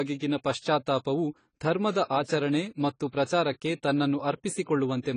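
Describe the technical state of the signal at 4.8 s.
At 4.8 s the speech carries AAC compression damage that runs through the whole clip: nothing above 10 kHz, and a warbling, smeared fizz on sibilants, likely from AAC-LC's coarse quantisation at a low bitrate near 24 kbps. The warble marks it as codec damage rather than simple low-pass filtering.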